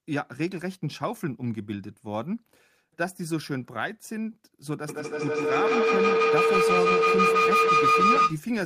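From 4.89 s to 8.44 s a ringing tone builds out of the speech, settling near 1.5 kHz and pulsing roughly every 150 ms, until it peaks at about 8 dB above the speech level. This is feedback howl: two devices on the same call in one room form a loop from microphone to loudspeaker and back, and each trip adds gain. The repeats grow rather than fade, narrowing onto the frequency the loop favours.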